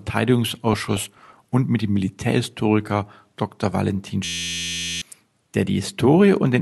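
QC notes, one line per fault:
0.73–1.44 s, DAB burbling: Over this stretch the audio takes on a burbling texture, with individual frequency bands briefly leaping up or down in level and short noise blips riding over the programme. Weak reception let a bit error rate of somewhat under one percent slip past error correction into the MP2 stream, corrupting scale factors and samples in single sub-bands. Unlike a clean dropout or a mute, the sound keeps flowing, but garbled band by band, frame after frame.
4.25–5.02 s, system hang loop: Here the audio stops progressing and turns into a steady, pitched buzz at 86.1 Hz. An 11.61 ms slice repeats exactly, dozens of times over, which fits a 512-sample buffer being replayed while the host was frozen. About 0.7 s of programme is lost. What separates this from random glitching or clicks is the strict periodicity: every repeat is identical, and the buzz pitch matches the loop length rather than anything in the source.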